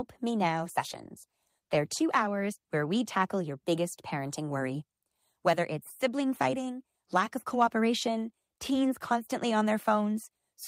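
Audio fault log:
0.47–3.29 s, call bitrate drop: the speech turns grainy and rough, with a watery smear, then regains its clarity just before "your biggest parenting worry". The call's bandwidth estimate fell, so the encoder was told to spend far fewer bits on each stretch of audio and coded it more coarsely. The degradation fits a cut from about 32 to 16 kbps, held at its lowest for roughly two seconds before the rate recovered.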